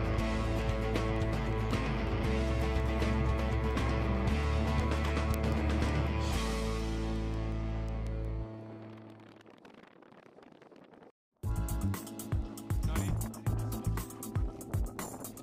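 A receiving device running on its own clock, unlocked from the digital source and off by roughly 150 ppm, slips one sample each time the clocks pass, producing word clock ticks about every 0.2 s from 0.25 s to 15.33 s, sharp and uneven.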